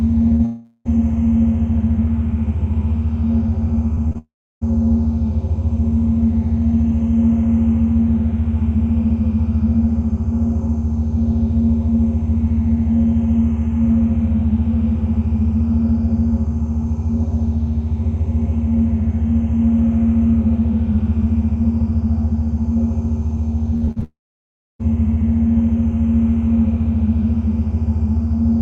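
At 0.35 to 0.41 s a short concealed packet loss smears the sound briefly: 40 ms never arrived and was patched by continuing what came just before.

From 0.45 to 0.87 s the sound stretches into a fading continuation with no silence, likely a long network dropout of about 400 ms where the receiver extended the last sound throughout.

Between 3.95 and 4.97 s scattered short gaps leave about four brief ticks or hiccups, each roughly 20 ms or less. They are spread apart, so the sound stays mostly intact.

Inside that span, 4.18 to 4.63 s has a second long network dropout, likely, where 440 ms is lost. A brief fading tail gives way to about 330 ms of silence, and the sound resumes later with that part missing.

From 23.77 to 24.04 s repeated packet loss gives a choppy sound with pieces missing. Four gaps up to 44 ms follow one another closely, so about half of that stretch is patched rather than real.

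This runs straight into a long network dropout, likely, from 24.04 to 24.81 s. About 760 ms is lost, and after a short fading continuation roughly 650 ms is plain silence before the sound returns further on.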